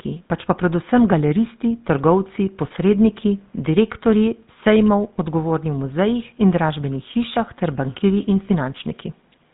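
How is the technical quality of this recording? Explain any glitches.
The speech carries a buzzy, gravelly roughness for the whole clip, with nothing above 4 kHz, so it sounds muffled and telephone-like. This is GSM full-rate codec damage, plainly audible throughout. The codec reconstructs the voice from a vocal-tract model driven by regularly spaced pulses, keeping only every third excitation sample. That coarse excitation produces the grainy buzz, and the hard 4 kHz ceiling strips the sibilance and air. The sound points to the 13 kbps GSM full-rate mode. Low room noise sits about 42 dB below the speech.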